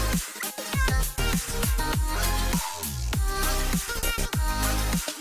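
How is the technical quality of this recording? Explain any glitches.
No technical faults or glitches can be heard anywhere.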